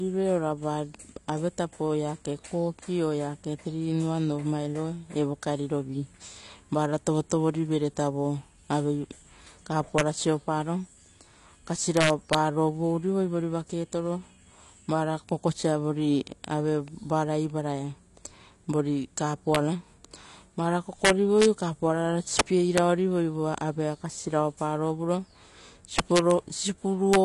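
It's a speech recording that sounds dull and a bit smeared, with nothing above about 11.9 kHz and a fizzy, warbly edge on sibilants. That's most likely AAC compression at a low rate, something like 32 kbps AAC-LC. On top of that there's integer overflow: loud peaks wrap to the opposite sign and crack violently at 9.98–10.01, 11.97–12.35, 19.55, 21.05–21.46, 22.39, 22.78, 25.99–26.31 and 27.13–27.16 s. The peaks go only about 1 to 8 dB past the limit, but each one flips across the full range, which is far harsher than clipping.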